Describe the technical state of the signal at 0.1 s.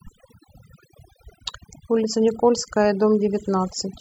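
At 0.1 s the speech is under overdone noise removal, which runs through the whole clip. A noise reduction stage set far too aggressively is clamping individual frequency bands down to nothing whenever their level sits near its noise estimate, taking soft parts of the voice along with the noise. The background collapses into near silence dotted with twinkling specks. On a spectrogram this shows as scattered isolated bright dots on a dark floor and ragged, gappy harmonics.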